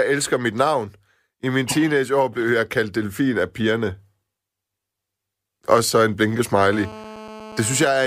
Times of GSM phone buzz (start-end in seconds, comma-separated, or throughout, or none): 6.73-7.86